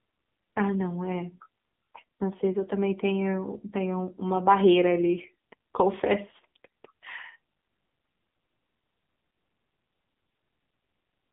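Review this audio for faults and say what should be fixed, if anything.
AMR narrowband mobile codec throughout: speech confined to 150 Hz to 3.6 kHz with nothing above 3.7 kHz, plus buzzy, synthetic texture fitting a low mode near 6.7 kbps. Buzz, not mere dullness, separates it from simple low-pass filtering. Prevent it by capturing over a wideband or uncompressed path instead of a mobile call.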